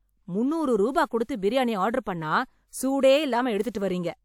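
Pre-echo appears at 1.24 to 1.29 s and again at 3.70 to 3.75 s in this speech, each a short hiss lasting about 53 ms and 47 ms before a sharp onset. The transform codec spread its quantisation noise across each block, so noise sized for the loud attack leaked into the quiet moment just before it. The onsets therefore arrive softened and smeared, announced by a brief wash of noise rather than starting cleanly.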